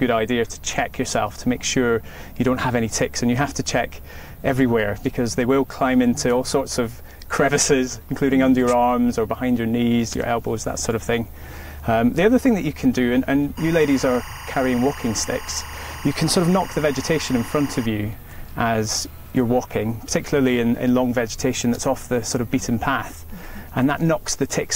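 From 13.57 to 17.86 s, linear timecode from a neighbouring track or cable leaks into the audio as timecode bleed. Its square wave, switching near 1 and 2 kHz at a rate that fits 24-frames-per-second code, sits roughly 15 dB under the sound as a steady chirping warble.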